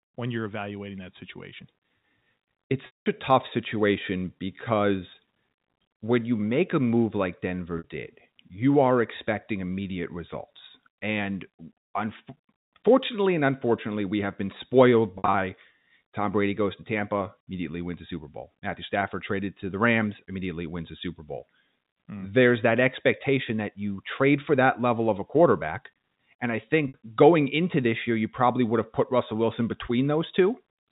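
At 2.86 s, 7.78 s, 15.18 s and 26.88 s there is packet loss with pitch repetition. The receiver fills each gap by repeating the last pitch period and fading it out over about 50 ms, so the sound turns into a held, buzzy tone instead of cutting straight to silence or clicking. The 200 ms loss at 2.86 s fades to silence before the speech returns with a short cross-fade. The 60 ms losses at 7.78 s and 26.88 s, and the 100 ms scattered over 160 ms at 15.18 s, are heard as brief held buzzes. The band-limited telephone sound of the G.711 coding carries through all of it.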